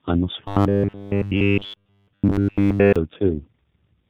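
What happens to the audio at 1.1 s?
At 1.1 s the speech is a rigid, metallic buzz pitched at 100 Hz that only loosely follows the speech, part of a stretch of robotic sound from repeated short buffers running from 0.48 to 2.96 s. New audio is likely arriving too seldom, so the player keeps replaying a short slice, which fits a 10 ms buffer, and essentially all of the real audio in that span is lost.

Underneath, the sound is rough, muffled and warbly. This is tandem speech coding across the whole clip: three speech codecs in a row (G.723.1 twice, then G.729A), with G.711 links between them, each re-encoding the previous coder's degraded output.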